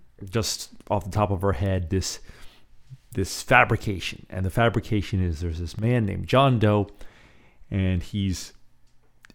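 Speech with a brief, abrupt dip in level from 5.79 to 5.84 s, right after "fabrication is there's this", where the sound drops by about 6 dB for some 50 ms and snaps back. This is likely a channel dropout: one stereo channel briefly vanished, so the mono sum lost half its shared signal.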